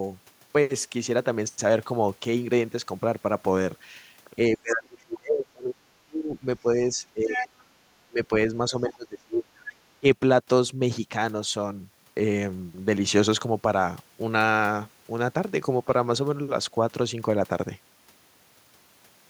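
From 4.57 to 7.72 s the speech is pushed down by about 30 dB. This is speech suppressed in double talk, likely an echo canceller ducking the talker while both sides spoke.

From 7.32 to 7.46 s the other side's voice leaks through, only about 5 dB below the speech. It is likely echo the canceller left in the microphone signal.

Suppression returns from 8.08 to 8.31 s, at about 20 dB. It comes again from 8.70 to 9.54 s, at about 30 dB.

Within that stretch, from 8.90 to 8.95 s, a faint scrap of leaked voice appears, about 25 dB down.

From 9.69 to 9.99 s the leaking voice is louder, about 15 dB below the speech.

A final brief dip of about 15 dB follows from 10.00 to 10.05 s.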